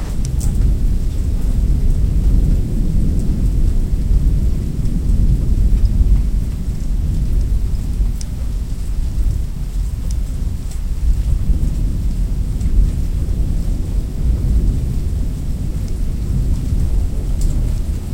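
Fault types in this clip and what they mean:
Doubled audio track: every sound returns about two seconds later, roughly 5 dB quieter, full-band and without the decay or room colour of an echo, likely from a second capture.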